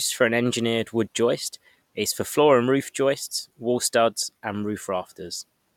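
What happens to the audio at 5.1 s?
Nothing goes wrong at 5.1 s; the speech continues intact through that moment.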